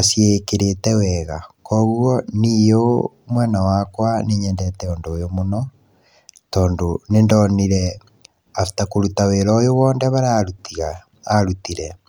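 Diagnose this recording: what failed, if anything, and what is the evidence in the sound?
Nothing failed in this recording, and the sound gives no evidence of any fault.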